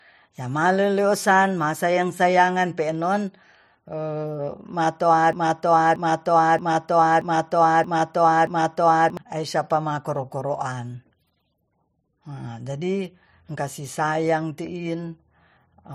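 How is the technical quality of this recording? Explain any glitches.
There's one real glitch here. From 5.33 to 9.17 s the speech gets stuck in a broken-record loop: a 0.63 s fragment plays six times back to back, identical each pass. That's likely a stalled player or stream resending its last buffered chunk, so whatever should've played there is simply gone.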